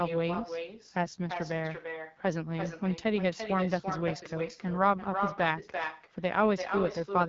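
From the first moment to the end, the speech carries an echo with no canceller. The far end is evidently playing the call through a loudspeaker, its microphone catches that playback, and nothing subtracts it, so each phrase returns after roughly a third of a second, about 7 dB below the original and thinner. On a waveform every syllable burst has a smaller twin trailing it; a spectrogram shows each harmonic pattern repeated, fainter and smeared, just behind.

Running through the whole clip as well is the AMR wideband (HD Voice) codec, working at a low setting. The roughness and rasp on the speech point to one of its two lowest rates, around 8.85 kbit/s, where the pulse-driven model of the vocal tract can no longer track the voice cleanly. The spectrogram shows a hard ceiling with nothing above 7.5 kHz, a grainy, noise-like band filling the top range in place of crisp harmonics, and a blotchy texture where the codec's errors smear the formant structure.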